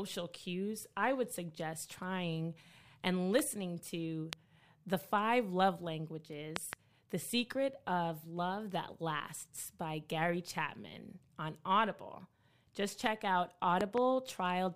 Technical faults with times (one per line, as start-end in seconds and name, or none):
3.39-3.41 loud pop
4.33-4.35 loud pop
6.56-6.75 loud pop
13.81-14.00 loud pop